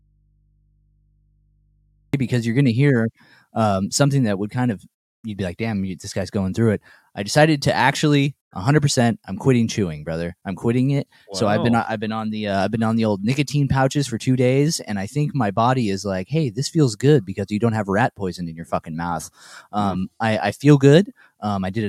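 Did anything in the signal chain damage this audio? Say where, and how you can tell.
Yes. A connection in the analogue wiring likely broke, leaving the input open. The audio dropout to a faint residue is already under way at 0 s and lasts to 2.14 s: only mains hum remains, around 40 dB below the signal, before the sound cuts back in abruptly.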